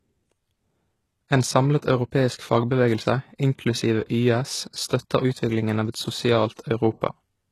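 Throughout the speech, the top of the spectrum appears to be resynthesised rather than coded, likely by HE-AAC compression at a rate that fits something around 16 kbps. Only the lower band carries real detail; above that, copied material shaped by a coarse envelope stands in for the original treble, and nothing at all reaches past 12.3 kHz. The result is plainly audible: sibilants come out gritty and metallic, with an upper register that sounds detached from the body of the voice.

From 6.54 to 6.59 s, the codec's quantisation noise, sized for a sharp attack that lands late in a transform block, spills into the quiet stretch just before it. This pre-echo spreads the noise about 46 ms ahead of the onset, so a brief hiss rises out of near-silence before the attack arrives, and the attack itself loses its edge, sounding softened and smeared rather than crisp.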